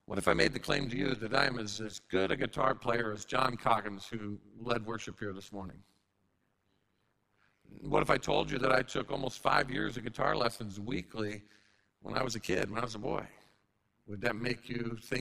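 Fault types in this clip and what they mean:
overlap-add ripple: frames rejoined with a mismatched overlap, so the level dips about 60 dB around a hundred times a second, giving a harsh, metallic buzz over all the speech.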